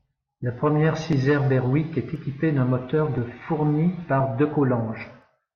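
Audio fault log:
1.13 to 5.22 s, periodic USB or driver dropouts: a tick every 1.02 s, about five in all. Each time around a millisecond of speech is simply skipped, so the waveform jumps. That points to something blocking the USB bus or audio driver on a fixed timer.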